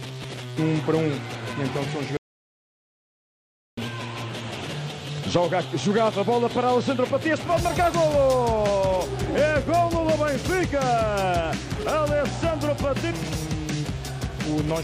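Input was likely lost while the recorder kept writing silence, giving an audio dropout to silence from 2.17 to 3.77 s, with no room tone.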